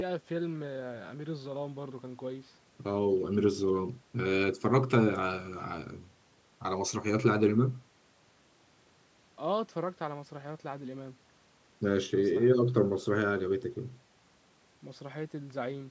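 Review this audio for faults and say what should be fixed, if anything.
Nothing needs fixing: the speech has passed through normal call microphone processing, with the lowest bass rolled off by its high-pass filter and no content above 8 kHz.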